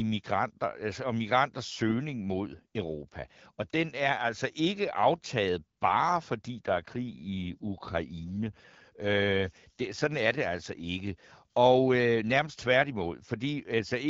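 Speech coded with the AMR wideband (HD Voice) codec suffers an AMR rate drop from 6.68 to 10.12 s, after "ikke aftaget bare fordi" and until "er det altså ikke". The link forced lower-rate coding, which fits a step from 12.65 down to 8.85 kbit/s. The voice turns rougher and more synthetic, with no gap and no loss of bandwidth.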